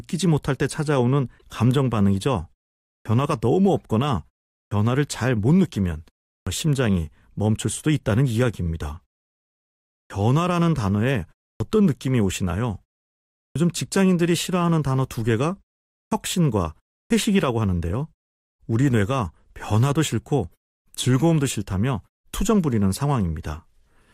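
At 1.38 s, a corrupt frame decoded produces a short glitch lasting about 50 ms. The damaged data spans roughly a couple of compressed frames. The decoder played them anyway, so misread gains and codes put energy where the speech has none. On a spectrogram this shows as a brief, blocky smear of misplaced energy, breaking the normal harmonic pattern for that instant, with a matching irregular blip in the waveform.

From 3.0 s onward comes a clipped start after a pause, eight times: at 3.0, 4.66, 6.41, 10.05, 11.55, 13.5, 16.06 and 17.05 s. Each follows a pause of between 0.3 and 1.1 s. The output device slept during the silence and needed time to wake, so about 52 to 56 ms of each onset is swallowed. Speech jumps in abruptly without its first sounds. In the waveform, each onset begins abruptly with no build-up, and the spectrogram shows a hard vertical edge at the start of the sound.

At 22.94 s, a second corrupt frame decoded gives a shorter glitch of about 24 ms. 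Again roughly a couple of frames were damaged and decoded regardless. It appears as a small, isolated patch of stray energy on the spectrogram and a momentary spike in the waveform.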